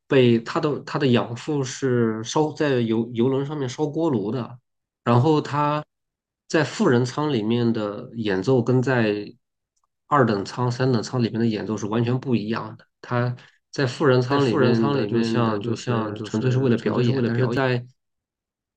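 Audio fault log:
14.31–17.57 s, doubled audio track: a second copy of the speech is mixed in alongside the original, likely captured again through a slower path, trailing by about half a second at roughly 5 dB below the main signal. Each syllable returns as a full-band repeat with no decay or room colour, so it reads as an overlapping duplicate rather than an echo, and it switches on and off abruptly at the edges of the span.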